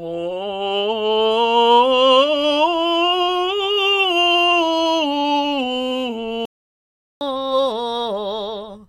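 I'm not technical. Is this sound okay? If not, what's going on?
No. At 6.45 seconds the music suddenly goes silent for about three quarters of a second, until 7.21 seconds. This is a playback stall: the player most likely ran short of data or got held up for a moment, so nothing came out until it recovered. It doesn't sound like a rest written into the music, because the sound cuts off abruptly in mid-flow rather than ending naturally.

From 7.21 seconds to the end, the music plays back too fast. This is catch-up at higher speed: after the gap, the player rushes through what it fell behind on, here at 1.25 times normal speed. Both the tempo and the pitch go up together, by roughly four semitones. That's what sets it apart from a simple key change, where the pitch would rise but the tempo would stay the same.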